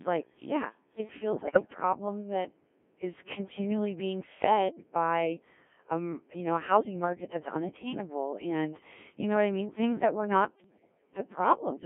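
Speech carried throughout by a Codec 2 vocoder, whose robotic, buzzy, sine-synthesised tone and narrow 200 Hz to 3.4 kHz band point to a rate near 1.3 kbit/s. This constant synthetic colour, rather than swirly pre-echo or gurgle, sets it apart from ordinary low-bitrate waveform codecs. Bit errors on the digital voice radio link strike from 1.33 to 1.74 s and from 10.64 to 11.14 s. Several percent of the bits flip there, so whole frames jump in pitch and level and dissolve into warbling gibberish. Packet-loss concealment would instead sound like a smooth repeat or fade.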